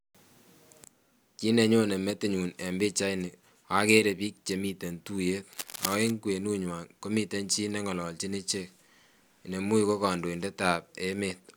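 In this speech clip, a worn cable or connector, likely disturbed while in use, causes cable scratch noise from 5.53 to 6.12 s: uneven scratching roughly 10 dB below the speech.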